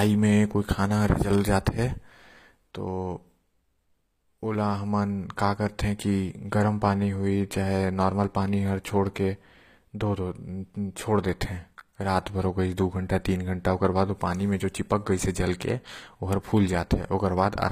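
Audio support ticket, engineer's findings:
Treble gritty, s sounds lispy and metallic throughout. Likely HE-AAC compression at low bitrate, around 24 kbps: upper band rebuilt by spectral band replication, harmonics misaligned above crossover. Spectrogram: copied-looking upper bands, coarse envelope, nothing above 15.4 kHz.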